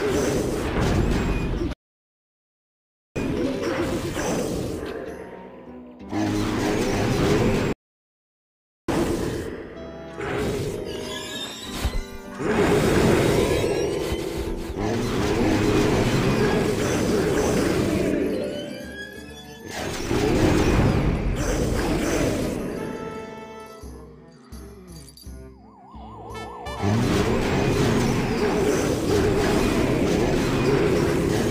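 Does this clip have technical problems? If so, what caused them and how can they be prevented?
Yes. The sound cuts out in mid-flow twice, going silent from 1.73 to 3.16 s (about 1.4 s) and again from 7.73 to 8.89 s (about 1.2 s), then picks up again. These are playback stalls, most likely caused by the player running out of buffered data or having its audio thread blocked, so nothing reached the output until it recovered. Larger playback buffers and a higher-priority, non-blocking audio thread would prevent them.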